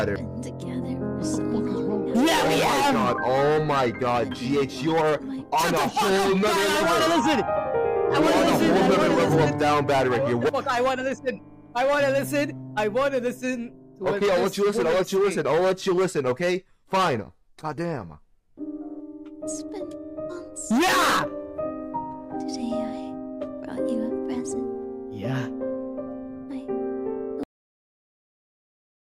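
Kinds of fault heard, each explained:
Cut-off end: The sound stops abruptly at about 27.43 s, in the middle of what is playing. There is no fade and no natural decay. The level drops straight to digital silence, and that silence fills the last 1.6 s or so. This happens when the final stretch of audio is never written out or played. The last buffers are simply missing, so the recording ends before the sound itself does.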